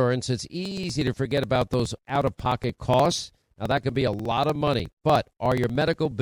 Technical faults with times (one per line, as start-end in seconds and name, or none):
0.65-6.12 periodic USB or driver dropouts